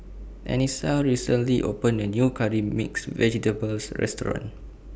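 No technical faults are audible.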